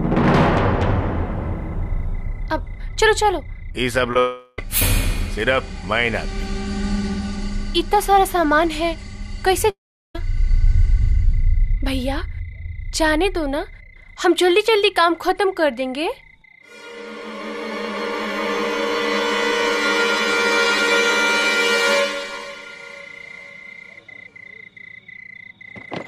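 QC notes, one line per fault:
4.11 to 4.16 s, short concealed packet loss: Two back-to-back gaps of about 10 ms each went missing. The receiver filled them by extending the preceding sound for 10 ms, then 15 ms, and blended back in. This heard as a brief smear.
4.19 to 4.59 s, long network dropout: About 390 ms of audio is lost, likely to a network dropout. The gap is filled throughout by a continuation of the last sound, a fading buzz or hiss. No silence is reached, and the audio resumes without the missing part.
9.70 to 10.15 s, long network dropout: About 450 ms goes missing, likely from a network dropout. The concealed continuation dies away quickly, leaving about 380 ms of silence. The audio then returns, with the lost stretch skipped.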